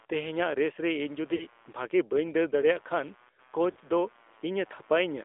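Speech heard through a mobile phone path, with two kinds of damage running the whole way through and two brief dropouts. The AMR narrowband mobile codec is plainly audible. The line is confined to roughly 300 Hz to 3.6 kHz, so there is nothing above that band. The speech has the buzzy, synthetic texture of a pulse-excited vocal-tract model, and the degree of coarseness fits a mid-range AMR-NB mode around 10 kbps.

Under the speech sits computer activity noise, a faint buzz pulsing at roughly 100 Hz and well down, about 35 dB below the signal. It rises and falls with the machine's workload rather than with the talker, because processor or peripheral load currents are modulating the ground shared with the audio input.

Lost AMR speech frames occur at 1.36 to 1.47 s and again at 3.72 to 3.78 s. In each case the decoder holds the last good pitch and spectral settings while ramping the gain down, giving a short smeared warble and dip. 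The concealed span of about 40 ms fits two consecutive dropped 20 ms frames. The speech then resumes weak or rough for a moment as the decoder's state recovers.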